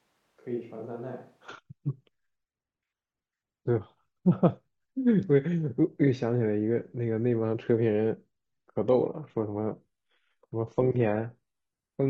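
From the very start until 1.48 s, the speech sounds roomy and hollow. The bass is thin and the level sits roughly 10 dB below what follows. A faint room noise lies well under the voice. At 1.48 s the sound snaps close and full. This is a switch to a distant microphone. The close microphone's signal was likely missing, so a mic farther from the talker carried the sound until the close one returned.

At 8.69 s the quality drops suddenly, with no gap, and stays low to the end. Codec artefacts rise. This is an adaptive stream at a lower bitrate. The connection slowed, and the player moved to a leaner version of the stream. The sound fits a step from AAC at 96 kbit/s down to HE-AAC at 16 kbit/s.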